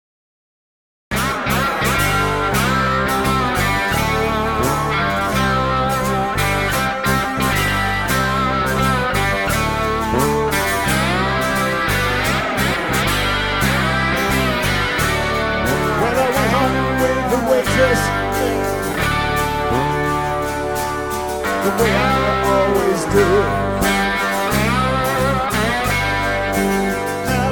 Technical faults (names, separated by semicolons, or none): cut-off start